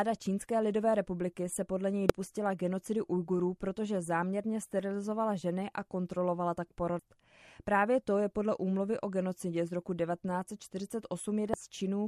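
At 2.10 s, after "republiky se podle něj", the speech breaks with a brief blip. The same happens at 6.99 s, after "ženy a kontrolovala tak", and at 11.54 s. Each is damaged data in the compressed stream. Corrupted bytes confuse the decoder. It loses frame sync and resyncs at the next header.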